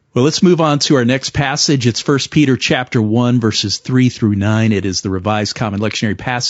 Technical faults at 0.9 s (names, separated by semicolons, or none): low-delay AAC compression